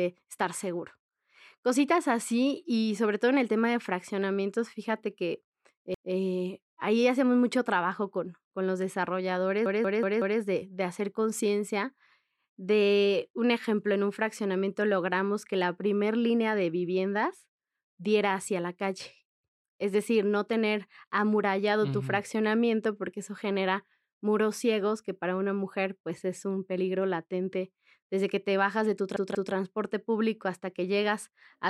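Repeated buffer at 5.94 s, 9.66 s and 29.16 s in this speech clip: late audio makes the same 186 ms slice (fitting an 8192-sample buffer) replay with hard joins, once after "de fraccionamientos fíjate que", four times before "de de hacer conciencia", twice after "te bajas de tu".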